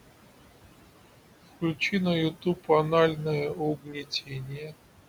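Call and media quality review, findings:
Noise suppressor artifacts, whole clip: background ducks about 18 dB between phrases, swells under speech. The steady room noise, about 13 dB below speech, is not itself a fault; the pumping comes from the suppressor.

Speech cut by the noise suppressor, 2.42–2.69 s and 3.77–4.76 s: soft speech pulled down with the noise, deepest about 15 and 18 dB. The speech is turned down rather than gone, unlike a packet dropout.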